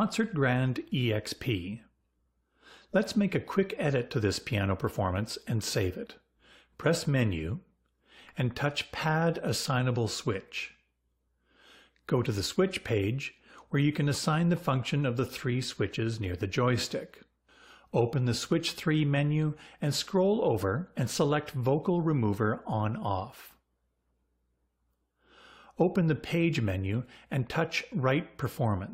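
No technical faults are audible anywhere in this audio.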